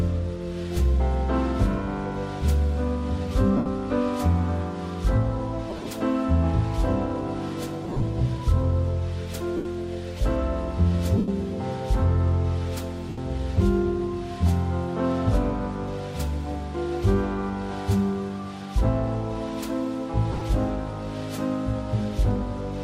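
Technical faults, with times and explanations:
3.57 s, 9.57 s, 11.18 s, 13.09 s: lost LE Audio frames, gaps of 80 to 100 ms concealed by replaying the last spectrum with random signs, so tones smear into noisy, fading hiss.
5.70–5.89 s, 7.84–8.03 s, 20.32–20.42 s: lost LE Audio frames, scattered dropouts with runs up to about 40 ms, each patched with sign-scrambled repeated spectrum, giving brief rough, noisy flutters.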